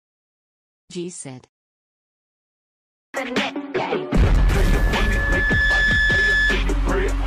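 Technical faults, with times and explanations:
4.37 to 6.63 s, loudspeaker feedback squeal: a microphone was picking up the loudspeaker it was feeding, and at about 1.7 kHz the gain around that loop climbed above one, so each pass reinforced the last. The result is a single steady tone that swells over roughly a second and a half until it sits about as loud as the rest of the sound, then holds as a piercing whistle until it stops.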